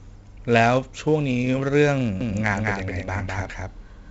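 Heavy 4-bit ADPCM compression runs throughout: gritty hiss riding every loud passage, smeared attacks, and nothing above 7.7 kHz, which fits a 64 kbps stream. From 2.21 s to the end, a doubled audio track appears, with an abrupt copy about 5 dB quieter trailing about a fifth of a second behind, likely from a second, slower capture path.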